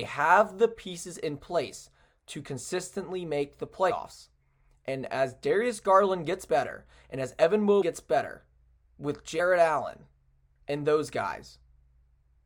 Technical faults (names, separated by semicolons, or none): compressed frames skipped